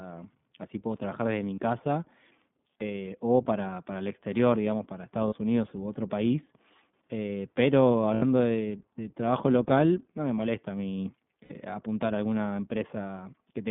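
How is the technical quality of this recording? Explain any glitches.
The technical quality is limited. The speech is coded narrowband and has four brief dropouts that the decoder papers over.

Throughout, the iLBC codec shapes the sound. The band runs only from about 150 Hz to 3.6 kHz. Each 20 ms frame is coded on its own, at a rate that fits roughly 15 kbps. That leaves plainly audible roughness and a synthetic edge.

Lost iLBC frames occur at 1.54 to 1.60 s, 5.28 to 5.34 s, 8.14 to 8.24 s, and 11.44 to 11.51 s. The gaps last about 40, 40, 80 and 60 ms. The decoder repeats the last pitch cycle with added noise, so each gap sounds like a held, buzzy vowel. The speech recovers almost at once, because the frames stand alone.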